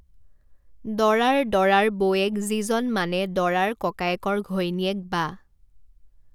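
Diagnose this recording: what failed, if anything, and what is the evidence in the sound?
Nothing in this speech recording points to a failure at any stage of the chain. No audible event calls for a diagnosis.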